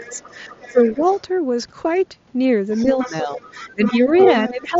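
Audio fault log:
0.00–0.16 s, 0.72–0.99 s, 2.83–4.13 s, 4.49–4.80 s: speech suppressed in double talk. The talker dips by about 10 dB, about 15 dB at the end, likely from the echo canceller ducking during overlap.
0.04–1.21 s, 2.73–3.97 s, 4.17–4.50 s: other side's voice leaking through. A second voice is heard, faint at first and nearly as loud as the talker by 4.2 s, likely from residual loudspeaker echo.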